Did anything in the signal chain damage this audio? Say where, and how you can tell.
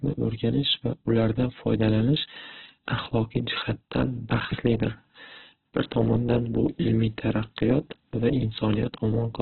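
Yes, at the codec stage, throughout. The speech sounds rough, grainy and noisy, with nothing above 4.3 kHz. That is likely Opus compression in its music mode at a very low bitrate, near 8 kbps, narrowing the band and noise-filling starved bands.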